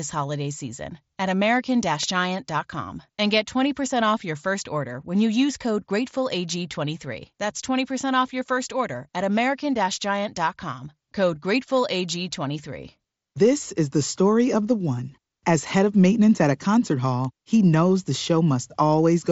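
At 2.03 s a sharp snap cuts across the speech, and another lands at 17.25 s, right after "maintenance at a concert" and before "he knows the". Each is an electrical switching spike, most likely a nearby switch arcing into the line, over in a few milliseconds, heard through the band-limited, slightly grainy mSBC headset path.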